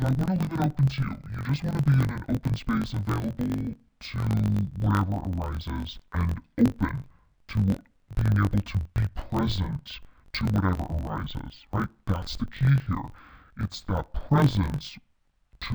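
Throughout, the speech sits an octave low, doubled and choppy: interleaved audio read as planar, with each block, likely 1024 samples, split into half-speed left and right runs, chattering at about 47 Hz.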